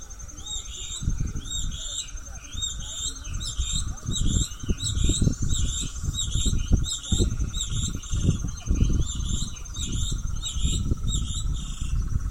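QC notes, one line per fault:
Nothing to flag here; I listened all the way through and didn't catch a single problem worth a line.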